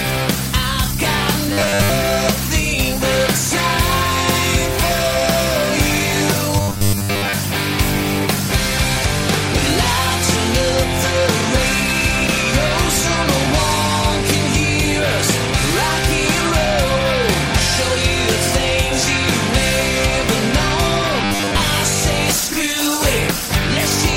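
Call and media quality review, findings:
Robotic sound from repeated short buffers, 1.53–1.91 s, 6.56–7.33 s, 21.24–21.62 s: rigid metallic buzz at 100 Hz. Likely starved playout buffer looping the last 10 ms, skipping most real audio. Spectrogram shows 100 Hz harmonic comb; waveform shows identical 10 ms cycles.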